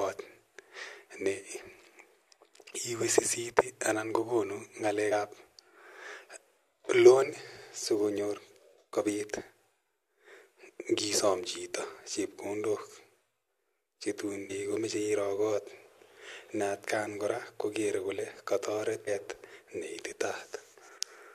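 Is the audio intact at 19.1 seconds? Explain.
No. Damaged data in a compressed stream appears at 19.07 s, right after "kora kokere kole kataret". A short stretch of the encoded speech there is corrupted, so the decoder cannot read those frames properly, loses its place in the stream and has to hunt for the next valid frame header before normal decoding resumes. For a split second the result is a brief, harsh squawk or blip in place of the intended sound.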